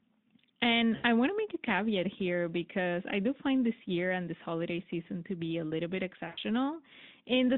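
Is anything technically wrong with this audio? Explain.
Yes, there are two dropouts where VoIP packet loss was concealed by the speech codec, at 0.95 to 1.05 s and again at 6.27 to 6.38 s, covering roughly 80 and 100 ms. When packets went missing, the decoder kept extrapolating from its last pitch and filter settings while turning the gain down each frame, so the speech smears into a fading buzzy tone or coloured noise. The gaps' lengths fit four and five lost 20 ms frames. The narrowband Speex line behind it shows only light codec roughness.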